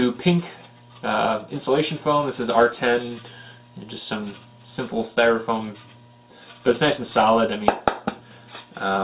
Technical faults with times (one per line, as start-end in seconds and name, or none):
none